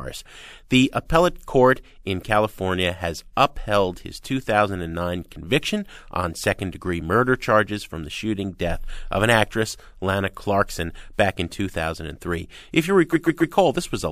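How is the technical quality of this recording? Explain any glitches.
The recording has one glitch near the end. From 13.12 to 13.54 s there are repeated frames. A 139 ms block of compressed audio is played three extra times, which fits a run of three frames. The speech stutters and runs 418 ms longer.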